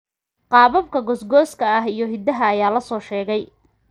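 Throughout the speech, the treble flickers and drops out under a gritty haze. This is likely Bluetooth SBC compression, starving the top bands, which fits roughly 96 kbps.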